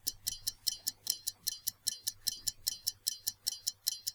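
A recording of sounds with a brief jumbled moment from 1.08 to 1.12 s: chunks out of order, where one 20 ms chunk arrived late and played after its successor.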